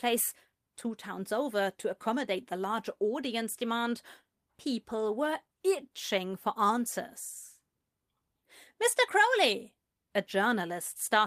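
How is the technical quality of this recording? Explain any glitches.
No glitches or technical faults can be heard anywhere in the recording, and the signal holds steady throughout.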